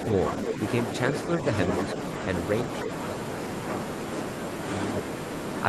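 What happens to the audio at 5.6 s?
At 5.6 s the speech carries on intact, with no dropout, click, distortion or other fault to be heard.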